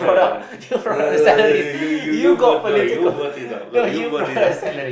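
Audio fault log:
No audible faults detected.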